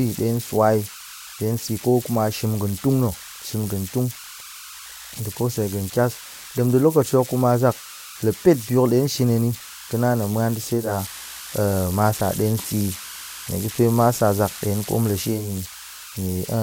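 Converter idle tones run through the whole speech clip. An undithered delta-sigma converter, given very little input, settles into repeating bit patterns that produce tones around 1.5 kHz in the pauses and a grainy texture under quiet syllables, about 14 dB below the signal. A spectrogram shows a thin horizontal line near 1.5 kHz that persists through gaps. The waveform shows low-level fuzz where silence should be.

At 10.73 s the digital radio blends to analogue FM, cross-fading over 322 ms, and it stays there until 15.57 s. The digital stream was lost, so the receiver fell back to the broadcast of the same station. Hiss rises to roughly 30 dB below the speech, and the level shifts by about 2 dB. A spectrogram shows a broadband noise floor filling in. The waveform shows a slight step in amplitude at each transition.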